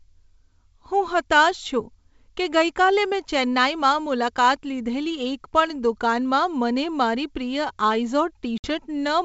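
At 8.58 s a hard-edged gap of about 60 ms opens, consistent with a few lost packets, until 8.68 s. This packet loss on an ADPCM call leaves the decoder's predictor and step size mismatched, so speech resumes slightly distorted before settling.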